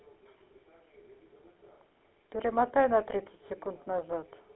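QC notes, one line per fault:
throughout, GSM full-rate codec: speech is confined to a 250 Hz to 3.4 kHz line band and carries a plainly audible buzzy, gravelly roughness, which fits a 13 kbps full-rate coder driving a vocal-tract model with sparse regular pulses. Unlike simple band-limiting, the grit rides on every voiced sound.
3.48 to 3.50 s, lost GSM frames: a brief rough, metallic ring replaces the sound, which fits one missing 20 ms frame filled by repeating the last good frame's settings. Unlike a dropout or click, the gap is bridged by a tonal ring rather than silence or a sharp edge.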